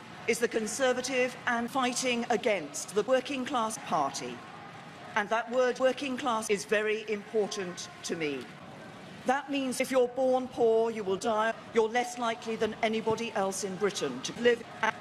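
No technical faults can be heard anywhere in this audio. Nothing along the way stands out as a problem.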